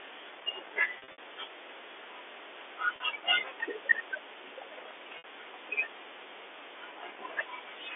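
At 0.98 to 1.18 s there's packet loss with pitch repetition: about 140 ms goes missing in bursts, the longest 60 ms. Each gap is patched by looping the last pitch period, so it buzzes and stutters. Brief held-note blips follow at 2.96 s (40 ms) and 5.18 s (60 ms).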